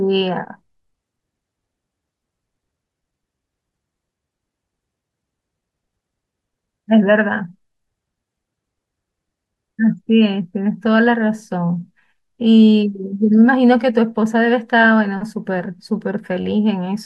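At 9.78 s the speech jumps ahead as compressed frames are skipped: a couple of damaged or missing frames never reach the output, so roughly 40 ms of audio vanishes. The speech simply lurches forward at the join.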